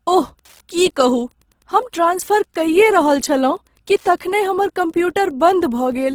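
Throughout the speech runs Wi-Fi interference: a radio's beacon, rectified by the audio circuit, ticks steadily every 102.4 ms, around 40 dB below the speech. Across the whole clip the speech also sounds grainy, rough and noisy in its tones while still reaching up to 20.3 kHz, which points to Opus compression in its music mode, likely at a low rate near 16 kbps.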